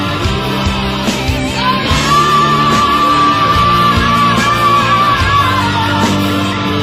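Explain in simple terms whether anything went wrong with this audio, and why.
Nothing stood out on listening; there was no sign of anything having gone wrong with this audio.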